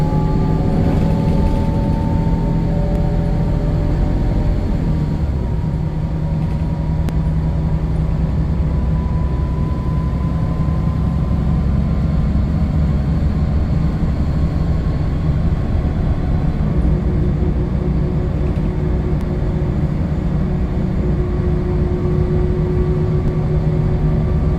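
Dropped buffers (overrun) at 2.96, 7.09, 19.21 and 23.28 s: each is the sound jumping ahead, losing a few milliseconds, roughly 5 to 10 ms. These are likely samples the software failed to collect before the hardware overwrote them, leaving the two sides joined directly with no gap.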